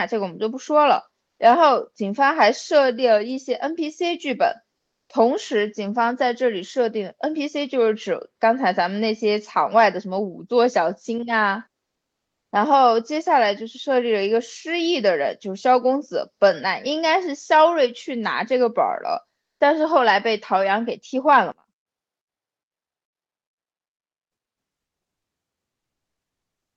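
Speech carried over an Opus call path, with energy stopping near 8 kHz on a spectrogram. From 21.52 to 24.14 s the level collapses by about 27 dB, likely from one channel inverted, so centred content cancels in mono. The waveform shrinks to a thin residue and the spectrogram fades almost blank.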